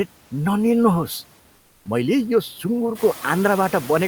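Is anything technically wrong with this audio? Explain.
Yes, there are two faults. Throughout the speech, a noise suppressor treats steady background as unwanted and pulls those bands down by about 17 dB frame by frame. These noise suppressor artifacts make the residual noise dip between words and return beneath them. The room noise that rises around 3 s is part of the recording.

From 1.55 to 1.85 s, the sender likely stopped transmitting during a pause (Opus DTX), and the receiver filled those 300 ms with comfort noise in place of the background. The real background gives way to a smoother noise about 4 dB quieter.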